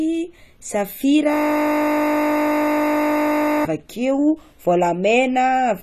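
From the start the audio sounds dull and smeared, with nothing above 14.1 kHz and clearly audible warble, likely AAC compression at a low bitrate near 32 kbps. From 1.34 to 3.65 s a system hang loop replays one 20 ms buffer over a hundred times, producing a steady 50 Hz buzz.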